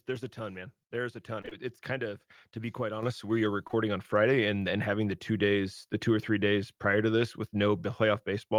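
From 1.41 to 1.53 s the speech smears and wobbles through three back-to-back gaps. This is short concealed packet loss: three 20 ms stretches never reached the decoder in time, and it filled each one by extending the preceding sound before blending back into the real signal.

At 3.03 s the voice and background jump up together by about 7 dB within 10 ms. This is the microphone volume stepped up: the call software raised the device's input gain in a single step.

The same smear returns from 3.67 to 3.75 s, where two more consecutive 20 ms losses are covered over by concealment.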